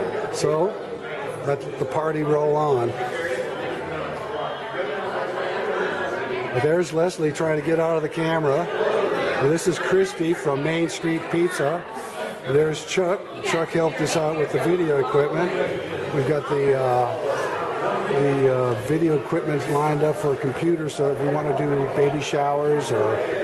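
The sound passes through a call codec that caps the top end near 12 kHz. Clock drift between sender and receiver runs through the whole clip. The sender's clock runs roughly five percent fast, so the receiver's jitter buffer keeps filling faster than it empties. To keep latency in check, the receiver has to throw small slices of audio away, and tiny seams keep appearing at uneven spacing.

Those seams are the repeated timing corrections. They fall from 0.53 to 3.40 s and again from 6.34 to 23.33 s. Across both stretches the playback effectively runs at 104 percent. Each correction drops only a short piece, always in the same direction. The result is faint hiccups and a slightly hurried, unsteady pace rather than clear gaps. The corrections pause between 3.40 and 6.34 s.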